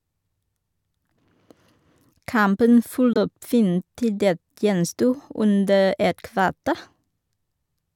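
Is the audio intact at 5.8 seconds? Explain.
Yes, at 5.8 seconds the speech is intact, with no dropout, glitch or other fault at that moment.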